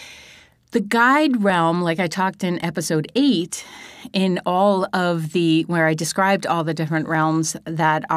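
Two devices likely running on separate clocks, drifting apart by a few hundred parts per million, cause clock drift buffer slips. From 0.37 s to 7.15 s, a tiny block of samples is dropped or repeated every 1.13 s, giving about seven regularly spaced clicks in the speech.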